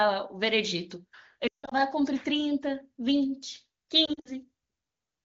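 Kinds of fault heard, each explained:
Lost AMR speech frames: radio errors broke whole frames, so the decoder covered the holes by repeating the last good pitch and vocal tract settings with the gain sliding down. From 1.47 to 1.74 s, a 160 ms run lets the speech sink quickly toward silence before it returns rough. The lighter patch at 4.05 to 4.32 s, with gaps of up to 60 ms, dips toward silence against the clean HD Voice wideband sound.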